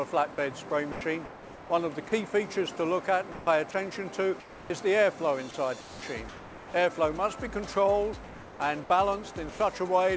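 From 0.92 to 2.12 s the sound is chopped by the voice detector, likely from the sender's detector toggling transmission. About 570 ms is replaced by comfort noise, so the sound stutters. At 3.32 to 3.47 s, sound is dropped by the voice detector, likely because the detector treated quiet material as background. About 70 ms of sound gives way to steady noise or near silence. From 4.40 to 4.70 s, comfort noise replaces the background, likely during a discontinuous-transmission pause. The real background becomes a featureless hiss about 4 dB quieter. Within that stretch, from 4.68 to 4.70 s, the onset is clipped by the voice detector, likely because it reacted late. The first 20 ms are missing, so the sound starts abruptly. From 5.81 to 6.74 s the chopping returns, with about 660 ms swapped for comfort noise. At 8.24 to 8.60 s comfort noise again stands in for the background, about 2 dB lower. 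At 9.50 to 9.59 s another dropout removes about 80 ms of sound. Throughout, the call codec leaves nothing above 8 kHz, which fits G.722.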